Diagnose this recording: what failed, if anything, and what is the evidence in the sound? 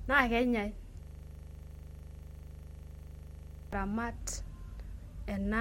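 The failure is at the driver or buffer stage: a system hang loop from 1.03 s to 3.73 s. Speech gives way to a single 40 ms slice of audio repeating about 67 times, a rasping buzz at 25 Hz. The host or driver stopped refilling the ring buffer while the hardware kept replaying it. The waveform shows identical 40 ms blocks tiled end to end. The spectrogram shows a frozen, striped pattern with harmonics spaced 25 Hz apart.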